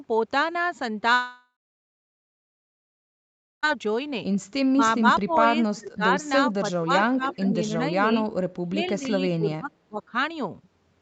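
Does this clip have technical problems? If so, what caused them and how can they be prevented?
Yes. Three kinds of fault are audible.

A long network dropout runs from 1.13 to 3.65 s. About 2.5 s of sound never arrives. The receiver stretches the last sound into a fading buzz, then leaves about 2.1 s of near silence. Sound resumes with the gap lost. The likely cause is a burst of lost packets. A steadier connection, or forward error correction with redundancy, would prevent it.

Speech suppressed in double talk occurs at 4.70–5.35 s, 5.72–6.02 s, 6.51–8.05 s and 8.65–10.13 s. The speech dips sharply, by roughly 20 to 30 dB at worst. The likely cause is an echo canceller that ducks both sides when they overlap. A canceller with better double-talk detection, or a headset, would prevent it.

An echo leak appears at 5.31–5.35 s and 7.32–7.36 s. A faint delayed copy of the speech slips through, about 20 to 25 dB down. 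It arrives 370 ms and 397 ms late. The likely cause is a loudspeaker whose echo was not fully cancelled. Headphones or a better-tuned echo canceller would prevent it.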